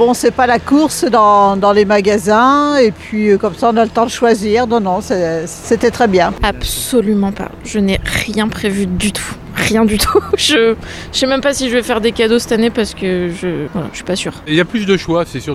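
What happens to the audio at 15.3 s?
Nothing goes wrong at 15.3 s; the audio plays through that moment intact, with no dropout, click or other fault.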